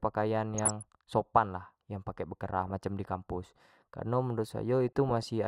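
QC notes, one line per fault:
0.55–0.82 s, DAB burbling: burbling over the speech just before "sopan lah yang pake". Weak reception let bit errors, roughly 0.4 percent, past error correction, so corrupt samples put short noise blips in single sub-bands.
2.67–2.71 s, DAB burbling: a brief burst right after "lah yang pake bekerah", a heavier error rate, under 1 percent, over only a few frames.
4.88–5.23 s, DAB burbling: a longer run after "di kampus kareno menurut".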